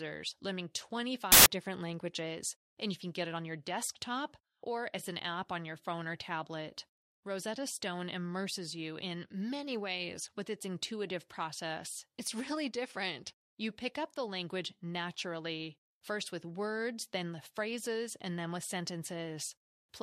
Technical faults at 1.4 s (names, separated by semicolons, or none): samples built from the wrong bytes